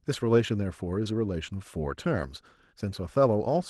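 At 1.04 s there's a short concealed packet loss in the speech: roughly 10 ms of audio didn't reach the decoder in time, so the receiver covered the hole by extending the sound just before it, carrying on the pitch or shaped noise, then eased back into the real signal. Because the patch is so short, what you get is a tiny smear or wobble rather than an obvious dropout. The call path itself is band-limited to about 12 kHz, which fits a call codec like Opus.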